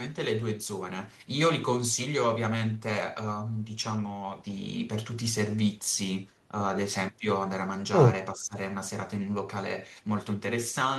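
A speech recording in which the level briefly sinks by around 10 dB between 8.34 and 8.55 s, likely speech suppressed in double talk as an echo canceller turns down near-end speech overlapping far-end audio.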